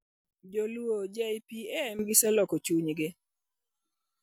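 From 0.33 to 1.99 s, a sudden gain jump drops speech and noise floor together about 12 dB, with no ramp; likely an unsmoothed gain change.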